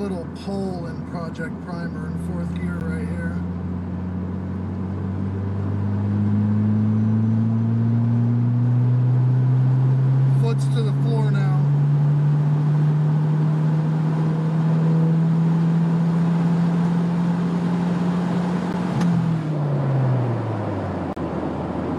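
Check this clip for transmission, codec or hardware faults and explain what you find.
There's one fault type here: blocks of digital silence. Two short dropouts of about 12 ms each, at 2.80 s and 18.73 s, fit a 512-sample buffer the program didn't fill in time. A longer 35 ms hole runs from 21.13 to 21.17 s. The audio snaps to zero and back with no fade, so the short ones land as ticks and the longer one as a brief gap.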